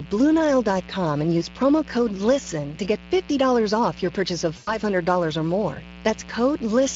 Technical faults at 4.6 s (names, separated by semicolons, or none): mains buzz; Speex codec; VoIP packet loss concealed by the speech codec